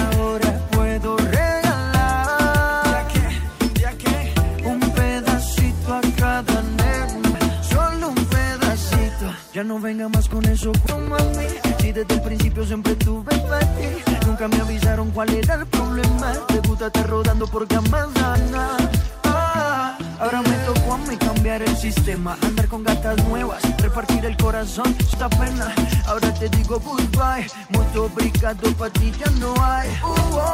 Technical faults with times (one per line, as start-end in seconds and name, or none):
7.34-7.37 damaged data in a compressed stream
10.86-10.89 damaged data in a compressed stream
18.35-18.38 damaged data in a compressed stream
25.13-25.17 damaged data in a compressed stream